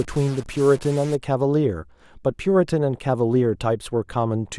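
A stuck bit runs from 0 to 1.15 s, likely one converter bit held fixed, adding harsh buzz and filling pauses with noise at about -35 dBFS.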